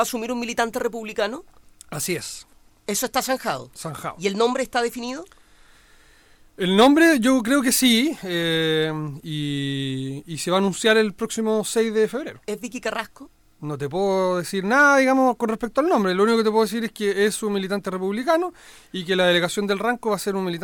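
From 2.02 s to 5.68 s the Bluetooth link falls into a SBC bit pool drop. The sending device cut the encoder's bit budget to keep audio moving over a crowded connection, which fits a bit pool halved from 28 to 14, near 108 kbps. With so few bits, the highest sub-bands are starved and the remaining bands are coarsely quantised, so the treble goes dull and a gritty, grainy noise rides on the sound until the higher rate returns.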